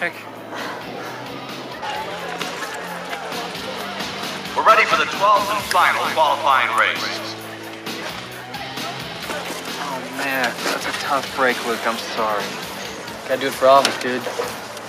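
No technical faults can be heard anywhere in the audio, and the signal holds steady throughout.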